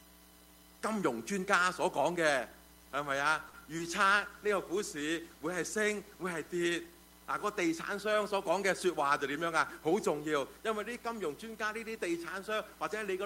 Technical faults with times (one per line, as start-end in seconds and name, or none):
3.47-3.55 short stall from a late packet
3.77-3.81 short concealed packet loss
3.90-7.21 call bitrate drop
9.05-10.26 jitter buffer speed-up